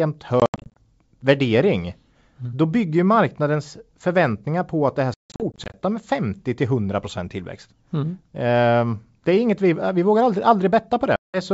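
Packet loss on an ADPCM call leaves hard silent gaps at 0.40–0.77 s, 5.14–5.75 s and 11.16–11.39 s, followed by slightly distorted speech while the decoder's predictor resynchronises.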